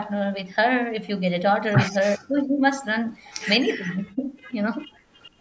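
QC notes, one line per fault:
2.17–2.64 s and 3.78–4.38 s, speech suppressed in double talk: the speech level collapses, by about 40 dB at worst in the first span and about 25 dB in the second, and each dip lasts roughly half a second. The likely cause is the far end talking over the near talker. The echo canceller could not tell the local speech from loudspeaker echo, so it pulled the whole microphone signal down, and the speech fades or breaks up for those moments.
4.8–4.85 s and 5.13–5.3 s, echo leak: a faint delayed copy of earlier speech comes through, about 30 dB below the speech in the first short scrap and about 25 dB below in the second. Both copies trail their source by 411–412 ms. That steady delay points to the far end's loudspeaker being picked up by its own microphone and likely not fully cancelled, so residual echo was sent back down the line.
4.89–5.02 s, background gated by the echo canceller: the room tone drops by up to about 10 dB for roughly a tenth of a second between the two echo scraps, then recovers. 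The canceller clamped the microphone hard while loudspeaker output was present and released it once that output fell away. This produces a brief hole in the ambience rather than a change in the speech itself.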